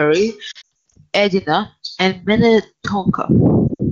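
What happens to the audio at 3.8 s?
Between 3.68 and 3.83 s the audio suffers lost AMR speech frames. About 80 ms goes missing in scattered gaps across 120 ms, the longest run lasting 60 ms. For each gap the wideband decoder repeats the last good pitch and vocal tract settings at falling gain, so the sound smears, warbles and quickly fades, then comes back weak. On a spectrogram the harmonics freeze into flat, darkening bands. The waveform's envelope shrinks in those gaps.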